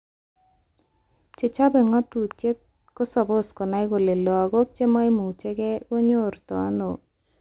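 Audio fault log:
Nothing stood out on listening to this speech, which carries the narrow band expected of mu-law telephone coding at 8 kHz.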